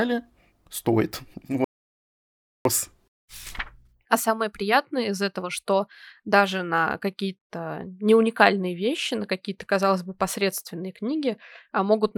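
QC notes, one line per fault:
1.64 to 2.65 s, audio dropout to silence: the speech cuts off mid-flow and returns about 1.0 s later. The gap is silent, with no room tone or background hiss beneath it. That points to the input feed being lost while the recorder kept writing silence, likely from a momentary disconnection, link failure or accidental mute. Whatever was spoken in that second is gone.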